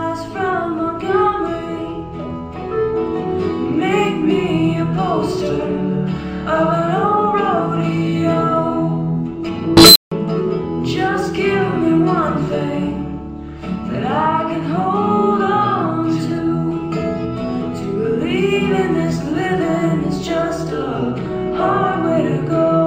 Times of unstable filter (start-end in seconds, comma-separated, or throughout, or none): 9.77-10.11